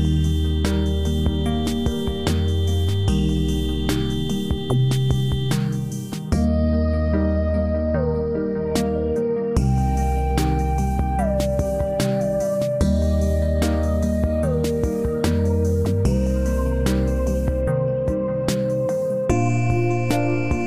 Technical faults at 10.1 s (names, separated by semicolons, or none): none